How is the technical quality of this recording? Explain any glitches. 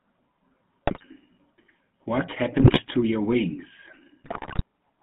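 The speech has clearly audible GSM full-rate codec damage from start to finish, and three short bursts of corrupted decoding on top of it.

GSM full-rate codec, throughout: the sound is coded at 13 kbps by modelling the vocal tract and driving it with sparse, regularly spaced pulses. The line band runs from about 150 Hz to 3.5 kHz. This leaves a buzzy, gravelly roughness.

GSM bit errors at 0.86 to 1.05 s, 2.58 to 2.80 s and 4.24 to 4.62 s: corrupted bits reach the decoder and upset its filter, pitch and gain values frame by frame. The sound breaks into squawks, pops and gargling, and the last burst is the longest and most damaged.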